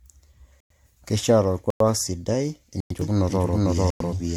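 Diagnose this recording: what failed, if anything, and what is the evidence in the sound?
Codec stage, throughout: the speech sounds swirly, hollow and smeared, with blunted consonant attacks and nothing above 19.9 kHz. This is likely generation loss from around seven MP3 passes at 96 kbit/s, each requantising on a shifted frame grid. A spectrogram shows accumulating holes and blurred onsets.

Storage or playback stage: hard-edged silences of 100 ms at 0.60, 1.70, 2.80 and 3.90 s, repeating every 1.1 s. These are gaps between chunks, where each 1.0 s block is followed by dead air. On the waveform they appear as flat silent stretches with abrupt edges.

Capture or edit stage, from 3.01 s to the end: a second full-band copy of the speech runs about half a second behind at about the same level, with no decay or room colour. This is a doubled audio track, likely from a parallel delayed path. 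The waveform densifies abruptly at 3.01 s.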